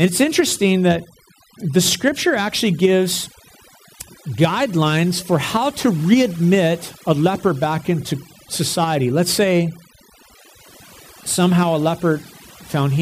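Throughout, overdone noise removal gates frequency bands near the noise floor, leaving near-silent gaps with twinkling specks; a spectrogram shows scattered isolated dots.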